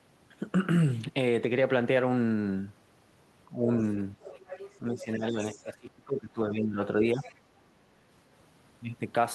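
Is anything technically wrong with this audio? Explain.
Yes. This speech has two related echo-control faults. Speech is suppressed in double talk at 3.49 to 3.7 s (a shallow dip of about 5 dB), at 4.15 to 4.19 s, and at 4.79 to 7.27 s, where it drops by about 15 dB for roughly a second and a half in pieces. This is likely an echo canceller ducking the talker while both sides speak. Unlike a network dropout, the level sags rather than going fully silent.

The other side's voice is leaking through at 3.88 to 4.78 s, 5.42 to 5.73 s and 7.19 to 7.4 s. It is a faint second voice, roughly 15 to 25 dB below the talker, and it likely comes from loudspeaker echo that the canceller did not fully remove. It is a separate voice, not a delayed copy of the talker's own speech.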